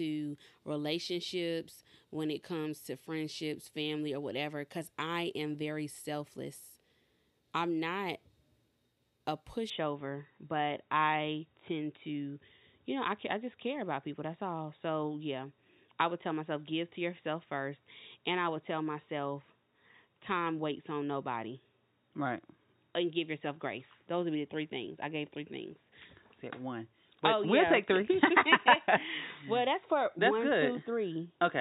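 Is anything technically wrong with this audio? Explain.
Yes. From 9.70 s to the end, the speech turns dull and boxy, with nothing above 3.8 kHz, with no gap and no level jump. This is likely an input switched to a poorer device. Unlike a plain low-pass filter, the tone colour and a new, faint background noise change too.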